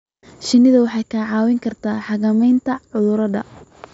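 No technical faults are audible.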